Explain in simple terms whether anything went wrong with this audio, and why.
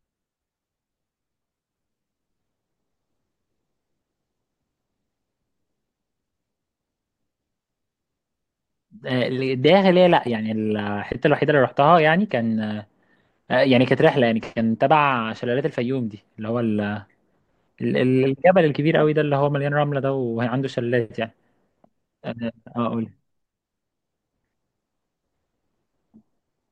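Nothing went wrong here: no dropouts, glitches, distortion or timing problems occur anywhere in the speech.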